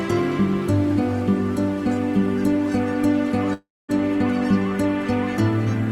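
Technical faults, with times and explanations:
3.53 to 3.90 s, long network dropout: the last sound before the gap carries on as a fading buzz for roughly a tenth of a second, then drops to about 240 ms of silence before the audio resumes. The cause is likely a run of lost packets. The receiver filled about 350 ms by stretching what it last had until that ran out, and about 360 ms of the original sound was never played.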